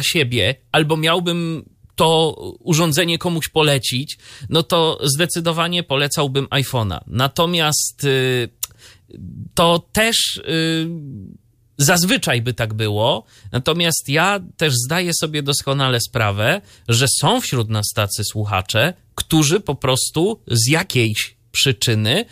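Nothing in the recording stood out as a technical problem on listening.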